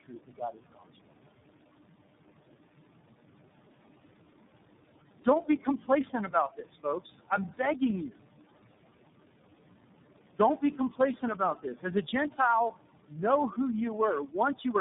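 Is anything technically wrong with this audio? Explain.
Yes. There are three faults: noise suppressor artifacts, tandem speech coding, and speech cut by the noise suppressor.

Noise suppressor artifacts run through the whole clip. The room noise sits about 16 dB below the speech, and the suppressor lowers each frequency band it judges to be steady noise, pulling the background down by about 18 dB in the gaps. The noise drops between phrases and comes back up under the speech.

Tandem speech coding is also present throughout. Nothing is left above 3.8 kHz, and the speech has the compounded roughness and warble of being decoded and re-encoded several times. This fits a path through about three different low-rate speech codecs in a row, each working on the already damaged output of the one before. The result sounds duller and more smeared than a single narrowband codec would.

Speech cut by the noise suppressor happens three times:
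• From 5.25 to 8.20 s, short stretches totalling roughly 0.7 s are pulled down by up to about 18 dB.
• From 13.08 to 13.19 s, the drop reaches about 17 dB.
• From 14.26 to 14.74 s, the drop reaches about 16 dB, affecting roughly a tenth of a second.

In each case the suppressor mistook quiet speech energy for noise, so those parts sound swallowed or faint.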